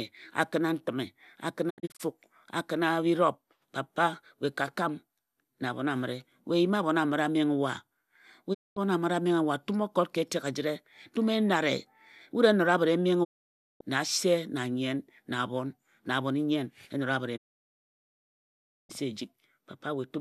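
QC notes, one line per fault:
1.69–2.01 s, digital broadcast dropout: after "a kina ntime a", 168 ms of audio drops out in several short holes spread over 288 ms, the longest 72 ms. Each hole has a 20 ms fade, and the sound returns at "a kina birop". The receiver is muting frames that failed, in steps that fit a 24 ms frame.
8.53–8.78 s, digital broadcast dropout: the audio fades over 20 ms into a 216 ms silence and comes back at "amire a". That part of the programme is lost while the receiver waits for good frames.
13.23–13.82 s, digital broadcast dropout: a single 552 ms hole with 20 ms fades at both edges. The receiver muted until good frames returned, and what was sent in that time never reaches the output.
17.36–18.91 s, digital broadcast dropout: after "e nara bit e", the audio fades over 20 ms into a 1.5 s silence, the longest mute in the clip. The receiver mutes and resumes only when valid frames come back.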